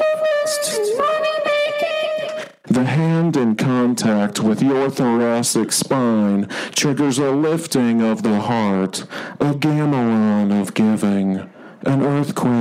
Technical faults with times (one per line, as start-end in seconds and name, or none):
none